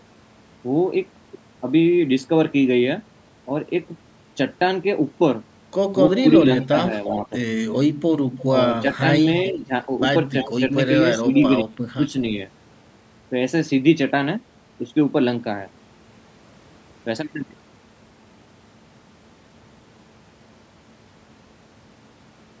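From 6.17 to 7.09 s there's an echo leak: a faint copy of the speech trailing about 348 ms behind, roughly 15 dB down, likely a far-end loudspeaker echo the canceller didn't fully remove. It returns briefly at 8.38 to 8.44 s (fainter, around 20 dB down), at 10.37 to 10.51 s, and at 11.34 to 11.43 s, each time with the same delay of about 350 ms. Overlapping that, speech suppressed in double talk shows up at 6.38 to 7.31 s and 8.52 to 9.72 s as short dips of around 10 dB. At 11.22 to 12.14 s the speech drops by roughly 30 dB for about half a second in total. That is likely the canceller ducking the talker while both sides speak at once.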